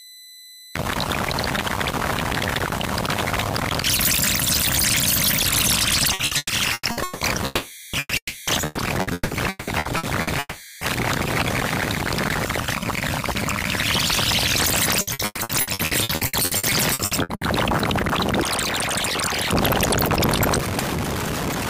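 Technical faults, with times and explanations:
6.13 to 7.24 s, 8.65 to 10.30 s and 15.01 to 17.44 s: repeated packet loss (robotic sound). Audio keeps dropping out in short holes: six in the first run, seven in the second and sixteen in the third, the longest 180 ms in the first two and 120 ms in the last. About 42 to 54 percent of each run is patched by stretching the preceding sound, so the sound turns choppy. On a spectrogram the bands freeze into repeated smeared blocks. The waveform shows recurring flat-enveloped copies between fragments of real signal.
7.45 to 7.96 s, 8.17 to 8.50 s and 10.39 to 10.84 s: long network dropout. Each is a lengthy stretch where the incoming audio was likely cut off, about 480 ms, 300 ms and 420 ms missing. The last sound is held as a buzz or hiss that fades, with about 60 ms and 20 ms of near-silence at the tail of the second and third. On a spectrogram these show as frozen horizontal streaks dimming toward the end. 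The waveform's envelope decays smoothly, then the signal restarts abruptly without the lost portion.
7.99 to 8.14 s: burst of packet loss. About 120 ms of audio never arrived. The receiver extended the previous sound while turning it down, ending in roughly 30 ms of silence before the sound resumes further on. On a spectrogram this is a short smeared patch fading into a dark gap. The waveform shows a shrinking repeated cycle, a brief flat stretch, then an abrupt return of the signal.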